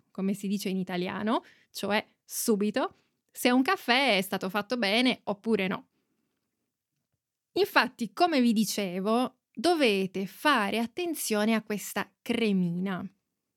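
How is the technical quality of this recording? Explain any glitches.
The speech carries one glitch: a bit error spike at 11.87 s. A single flipped bit in one sample throws that value off by a power of two, and the next sample is correct again, so the waveform shows a lone needle peaking around -35 dBFS. It sounds like one sharp, dry tick with energy across the whole spectrum. Unlike an edit click or a dropout, nothing before or after is missing or shifted, and the tick has no relation to the speech around it.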